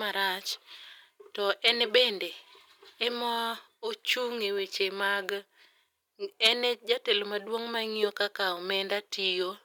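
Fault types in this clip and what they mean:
microphone overload: Brief harsh crackle at 1.67 and 6.44 s, with peaks flattened about 4 and 6 dB over. The input gain was likely too high.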